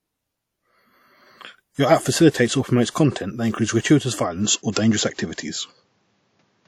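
WMA compression, likely the cause of the damage heard throughout, is plainly audible: a transform codec at what sounds like about 48 kbps leaves nothing above 18 kHz and smears quantisation noise across long blocks, giving a ringing, washy quality with hiss that breathes with the speech.

Pre-echo appears at 2.30 s, just before "or promotes", spreading 38 ms, and again at 2.90 s, just before "that includes gratuitous", spreading 53 ms. In each case an attack late in a codec block drags its noise forward, so hiss leads the onset and the attack sounds softened.

Input switched to a poorer device is the likely cause of the change at 4.45 s, right after "that includes gratuitous", lasting to the end. There is no gap at the switch. The band suddenly stops near 7.6 kHz, dulling the sound, the level shifts by a few decibels, and a new noise floor sits well below the speech.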